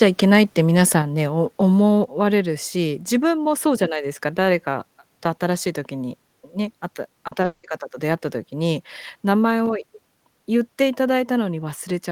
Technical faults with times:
1.02 microphone volume stepped down
2.04 microphone volume stepped down
7.27-7.45 short concealed packet loss
7.45-7.65 long network dropout

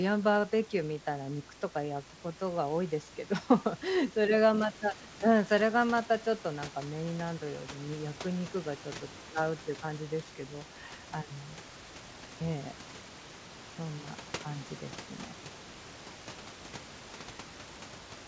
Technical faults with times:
none

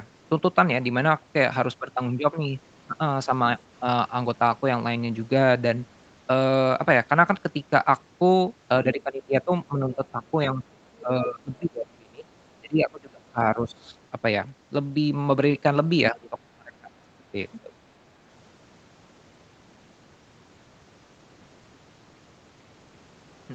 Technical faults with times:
8.84-10.22 speech suppressed in double talk
10.53-10.64 speech suppressed in double talk
11.01-12.27 speech suppressed in double talk
12.60-13.96 speech suppressed in double talk
16.11-17.36 speech suppressed in double talk
17.52-17.61 other side's voice leaking through
17.62-17.72 speech suppressed in double talk

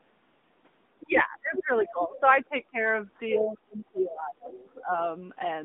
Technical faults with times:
0.00-5.65 AMR narrowband mobile codec
1.02-2.76 speech suppressed in double talk
1.56-1.89 other side's voice leaking through
3.38-4.93 speech suppressed in double talk
3.98-4.02 other side's voice leaking through
4.75-4.81 other side's voice leaking through

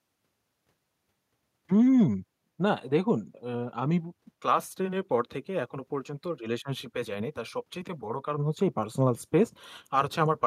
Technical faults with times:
none

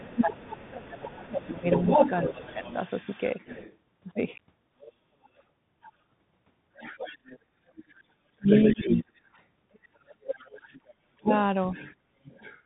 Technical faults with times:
0.00-12.65 Bluetooth CVSD headset codec
0.00-2.70 speech suppressed in double talk
0.12-3.75 other side's voice leaking through
4.81-5.90 other side's voice leaking through
6.75-9.20 other side's voice leaking through
7.48-7.60 background gated by the echo canceller
8.23-9.09 speech suppressed in double talk
9.74-12.60 other side's voice leaking through
11.17-11.29 speech suppressed in double talk

